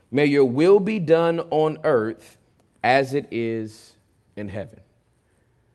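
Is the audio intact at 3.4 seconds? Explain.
Yes, the speech at 3.4 seconds is intact, passing through the WebRTC call path with only the ordinary coding of an Opus call and its top end limited to around 12 kHz.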